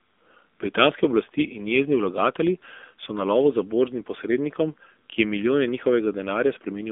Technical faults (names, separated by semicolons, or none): AMR narrowband mobile codec